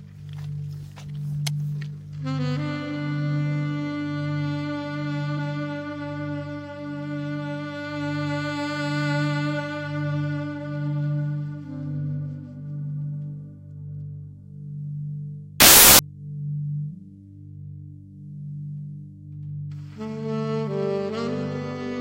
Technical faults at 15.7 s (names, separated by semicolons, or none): wrong sample width